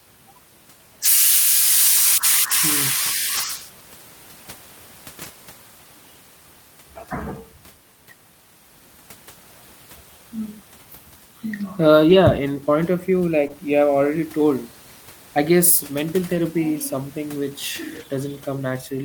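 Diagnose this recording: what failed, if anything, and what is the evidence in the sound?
Network packet loss, recovered at the codec stage as lost packets rebuilt from error correction. Seven events occur at 2.49, 3.37, 5.23, 12.09 (40 ms, ending just before "in point of"), 13.49 (just before "you have already"), 16.35 and 17.95 s (40 ms). The others are single 20 ms frames. Each time, the following packet carried a low-bitrate Opus copy of the missing one, so the decoder played that copy and left no gap. On a spectrogram each shows as a 20 or 40 ms block with coarser, noisier texture. The waveform stays continuous, with no dropout.

A short concealed packet loss sits at 13.47 to 13.51 s, immediately before "you have already". About 20 ms of audio never arrived in time, and the receiver synthesised roughly 21 ms to fill it by extending the preceding sound from its pitch or as shaped noise before blending back into real audio. 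It is heard as a brief smear or wobble. On a spectrogram the harmonics or noise band continue smoothly across the hole and lose detail, and the waveform shows a repeated-looking stretch with a soft crossfade at the end. The room noise floor, about 26 dB below the speech, is part of the recording rather than a fault.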